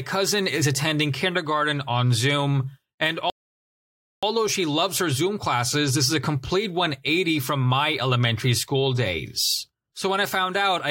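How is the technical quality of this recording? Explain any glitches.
The recording has one clear glitch, a rebuffering stall. From 3.30 to 4.23 s the speech cuts to dead silence, then picks up exactly where it stopped with "she loves her". The player ran dry of downloaded audio and waited, adding about 0.93 s without losing any speech. A waveform shows a flat line and a spectrogram a blank vertical band.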